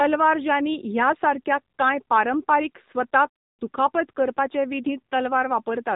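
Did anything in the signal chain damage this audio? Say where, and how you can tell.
Yes, at the codec stage: AMR narrowband mobile codec damage runs through the whole speech clip. Nothing passes above about 3.8 kHz, and the plainly audible buzzy, synthetic texture fits a low AMR-NB mode near 7.4 kbps, where a pulse-driven vocal-tract model rebuilds the signal frame by frame.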